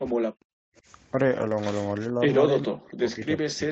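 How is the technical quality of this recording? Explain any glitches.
The recording has two kinds of glitches on top of a wideband call path whose sound stops at about 8 kHz.

From 0.12 to 0.74 s, again from 2.09 to 2.21 s, and from 2.64 s to the end, the speech drops, at worst to near-silence in the first and last spans but only slightly around 2.1 s. This is likely speech suppressed in double talk: the echo canceller confused the talker with the far side and attenuated both.

At 1.47 to 1.53 s, about 40 ms (which fits two lost packets) is a lost packet rebuilt from error correction. The decoder played rougher, noisier low-bitrate copies, so you hear a brief grainy patch rather than a silent gap.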